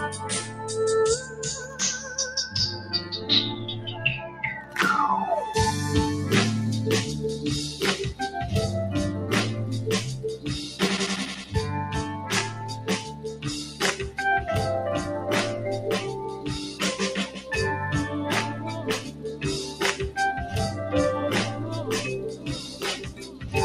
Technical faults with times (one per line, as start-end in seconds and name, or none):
0.00-23.64 noise suppressor applied to music or sounds
0.42-0.65 sound cut by the noise suppressor
2.79-3.29 sound cut by the noise suppressor
12.51-13.81 sound cut by the noise suppressor
18.99-19.44 sound cut by the noise suppressor
22.28-23.52 sound cut by the noise suppressor